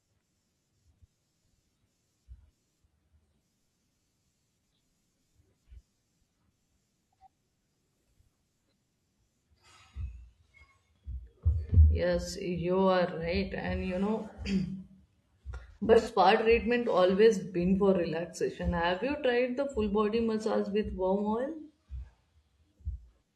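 At 15.71 s the speech turns briefly smeared and phasey until 16.07 s, just before "treatment always been for". This is AAC frame loss with concealment. About 171 ms of audio went missing in short gaps scattered over roughly 340 ms, which fits around four lost frames. The longest gap is only around 40 ms. The decoder patched each gap from the last good spectrum, so the sound stays present but turns noisy and blurred.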